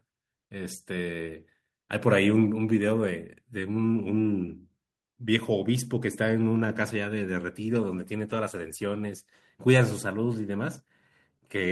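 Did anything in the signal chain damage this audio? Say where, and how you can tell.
Yes. Lost packets were rebuilt from error correction on the network: at 5.95 s and 8.29–8.35 s, low-bitrate copies fill in, so the speech turns briefly rough and noisy without gaps.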